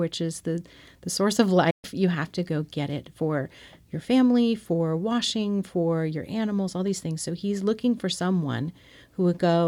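It's a speech clip with one clear digital broadcast dropout. At 1.70 s the audio fades out over about 8 ms and stays silent until 1.85 s, a hole of roughly 130 ms. That's the receiver muting after it lost sync or got frames that failed their checksum, then coming back once clean frames arrived. The gap's length fits about four lost 32 ms frames, and whatever was sent in that window is simply gone.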